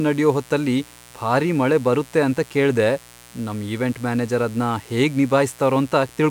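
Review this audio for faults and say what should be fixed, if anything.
A steady, raspy mains buzz runs under the speech from start to finish, sitting roughly 25 dB below it. It comes from sharp switching spikes on a 60 Hz supply, arriving twice per cycle, whose harmonics climb into the kilohertz range. Keeping dimmers and rectifying supplies off the recording circuit and using properly shielded, grounded cabling would prevent it.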